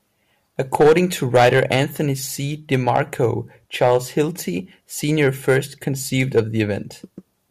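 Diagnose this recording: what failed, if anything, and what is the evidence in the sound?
Hard clipping at the converter input. Speech peaks are cut flat at 0.75–0.98, 1.35–1.81, 2.74–3.25, 3.81–4.21, 5.22–5.57 and 6.20–6.61 s. About 3 to 8 dB over full scale, the flattened tops add high harmonics.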